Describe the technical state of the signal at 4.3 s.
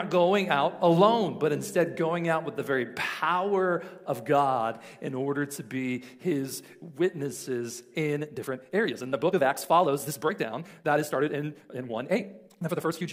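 At 4.3 s the signal is intact, with no audible fault at that point.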